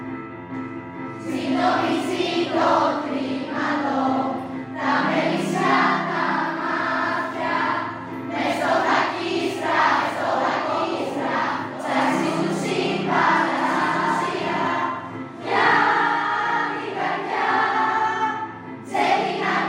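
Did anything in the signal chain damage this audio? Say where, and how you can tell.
Yes. From 9.99 to 14.67 s a doubled audio track appears: a dry, full-band copy a few dB quieter, trailing by roughly 1.5 s. It starts and stops abruptly, likely from a second, slower capture path.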